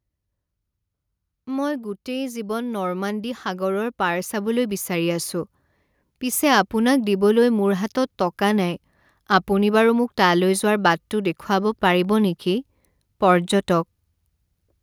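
From 2.05 to 5.35 s the speech and the background noise swell together, climbing steadily by about 8 dB. This is automatic gain rising: the gain control judged the input too quiet and pushed its gain up gradually over those three seconds.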